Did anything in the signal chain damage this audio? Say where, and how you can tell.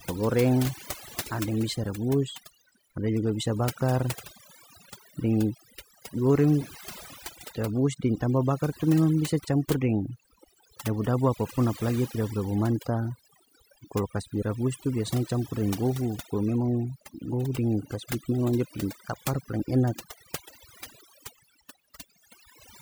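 Yes. A noise suppression stage in the call processing path was set far too aggressively, producing overdone noise removal across the whole clip. Because it attenuates or mutes any frequency band that sits close to its noise estimate, the background collapses into near silence peppered with twinkling, chirpy specks, and the quieter spectral detail of the speech is removed along with it.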